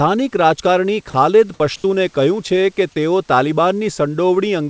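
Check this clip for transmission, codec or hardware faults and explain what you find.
Two short dropouts are audible, both during pauses or soft moments in the speech, with the call path's band limit at 8 kHz audible throughout, consistent with G.722.

From 1.10 to 1.14 s, about 40 ms of speech gives way to a flat, steady hiss before the sound resumes. This is sound dropped by the voice detector: the sender likely judged quiet speech to be background, stopped transmitting, and the receiver filled the gap with synthetic comfort noise.

From 1.76 to 1.84 s, the room background, which sits about 35 dB below the loud parts, becomes a smooth, featureless noise about 3 dB quieter for 80 ms. This is comfort noise in place of the background. The sender likely stopped transmitting during the pause, and the receiver substituted generated noise that only roughly matches the real room sound.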